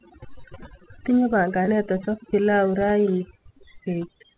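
Speech heard through a narrowband call path with nothing above 4 kHz, which fits G.711 mu-law at 64 kbps, carries overdone noise removal for its whole length. The suppressor has pulled individual frequency bands down wherever they sat near its noise estimate, so the background drops and breaks up into twinkling specks, and quieter parts of the voice are gated away with it. There are two short concealed packet losses, at 0.42 to 0.46 s and at 1.66 to 1.69 s, the second just before "achop pilau". Each gap sounds like about 20 ms of missing audio, which fits one lost packet. The decoder bridged each gap by extending the preceding sound and then crossfaded back into the real signal, so each one comes through as a brief smear or wobble.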